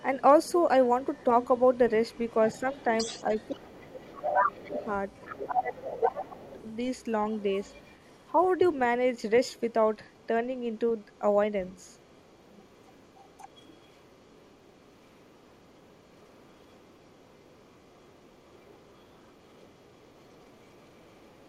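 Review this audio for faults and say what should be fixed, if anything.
The other side's voice leaking through is audible from 0.0 to 8.67 s, about 15 dB under the talker. Fainter scraps, about 35 dB down, follow at 9.18–9.72, 10.04–10.27 and 10.76–11.2 s, and then from 11.65 s to the end. A second set of formant bands sits under the main voice on a spectrogram. Residual loudspeaker echo that the echo canceller never fully removed is the likely cause. Better acoustic isolation, or a headset, and a well-converged canceller would prevent it.

Speech suppressed in double talk occurs at 3.06–4.87 s and 5.57–6.48 s. The talker's level drops by roughly 25 and 20 dB, for about a second each time. The waveform envelope shows sudden dips, and the spectrogram shows upper bands fading. The likely cause is the canceller mistaking overlapping speech for echo. Tuning its double-talk detector would prevent it.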